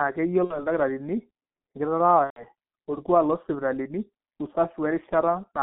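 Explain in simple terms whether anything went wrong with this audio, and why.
Several things went wrong. The whole clip went through the G.723.1 codec, an old internet-phone format that squeezes speech very hard. It keeps only sound between about 150 Hz and 3.5 kHz, so the voice loses its depth and its crisp top end. The damage here is heavy. Speech sounds muffled and rough, and consonants smear together because the codec updates its picture of the voice only every 30 ms.

There are also two dropouts from VoIP packet loss concealed by the speech codec. From 0.44 to 0.65 s, and again from 2.24 to 2.45 s, pieces of the call never arrived. The decoder filled each gap by stretching the last sound it had, so you hear a buzzy tone or coloured noise that fades instead of speech. The first gap fits about two missing 30 ms frames, the second about four. Because each frame is rebuilt from the one before, the voice stays weak briefly after each gap.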